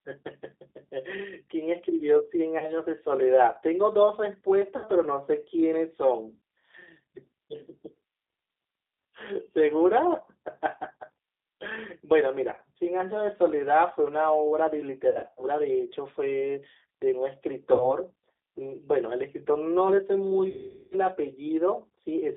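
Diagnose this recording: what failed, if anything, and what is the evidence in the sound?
The codec stage is at fault throughout. The speech is confined to roughly 300 Hz to 3.7 kHz and carries the rough, slightly synthetic texture of G.729 at 8 kbit/s, plainly audible. The decoder rebuilds each 10 ms frame from a vocal-tract filter, a pitch predictor and a few excitation pulses. That excitation model causes the buzzy graininess. A plain telephone band-limit would sound muffled but clean.

At the network stage, the clip shows VoIP packet loss concealed by the speech codec at 2.58–2.70 s (40 ms lost), 4.76–4.86 s (80 ms), 12.53–12.60 s (40 ms), 15.09–15.46 s (200 ms scattered over 280 ms, longest run 80 ms), 17.74–17.93 s (60 ms) and 20.49–20.95 s (420 ms). The decoder extends the last pitch and filter into a fading buzzy tone or coloured noise, and the voice stays weak for a while after packets resume. 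A dropout would instead leave clean silence or a click.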